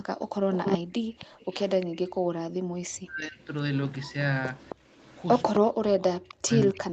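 Speech, carried over a call. From 0.53 to 1.96 s a delayed copy of the voice trails it by 266 ms, nearly as loud as the speech itself. That is an echo leak, likely from a loudspeaker whose echo canceller let the pickup through. A fainter echo, well below the speech, follows from 3.4 to 5.56 s and again from 6.29 to 6.79 s. The background is gated by the echo canceller twice. The room sound drops by about 29 dB from 0.81 to 1.15 s and by about 40 dB from 2.22 to 2.72 s, each time for roughly a third of a second, while the far side plays out. Speech is suppressed in double talk from 3.0 to 3.4 s and from 5.59 s to the end. The voice falls away sharply, likely because the canceller ducked everything while both sides spoke at once.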